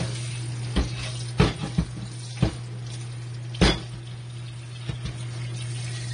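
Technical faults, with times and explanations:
Throughout: AAC compression. Nothing survives above about 9.7 kHz, and the plainly audible smearing sets this apart from a simple low-pass filter. It is likely lossy AAC-LC coding at a low rate, consistent with roughly 32 kbps, discarding detail it cannot afford to keep.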